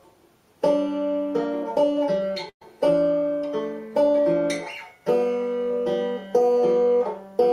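At 2.49 s the sound breaks off: the last moment is stretched into a brief held tone or hiss that fades, leaving about 80 ms of silence before the audio returns at 2.63 s, already further along. This is a burst of packet loss. Data failed to arrive in time, so the receiver concealed a 113 ms gap by extending and fading the previous sound, and about 120 ms of the original audio was skipped.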